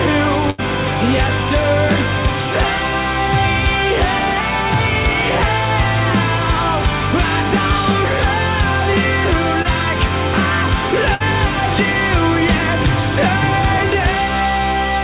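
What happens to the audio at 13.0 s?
Nothing goes wrong at 13.0 s: the audio carries on intact through that moment, still band-limited to about 4 kHz as expected of a G.711-style call path.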